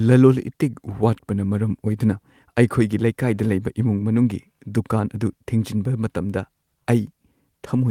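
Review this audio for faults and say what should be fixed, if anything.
Nothing needs fixing; no faults are audible here.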